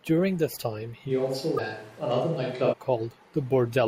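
A short speech recording in which, from 1.11 s to 2.72 s, the sound turns roomy and hollow with thinner bass, then snaps back just as abruptly. This points to a switch to a distant microphone, likely because the close microphone's signal dropped and a farther one such as a camera's took over. The level hardly changes, but room noise rises to roughly 30 dB below the speech. On a spectrogram the section shows weaker low frequencies, smeared reverberant tails and a raised noise floor between phrases, with sharp vertical boundaries at both ends. Inside that stretch, from 1.55 s to 1.59 s, a brief glitch marks damaged data in a compressed stream. The decoder misreads the corrupted frames, loses sync and skips to the next valid frame header. The waveform and the spectrogram both show a short disruption at that point.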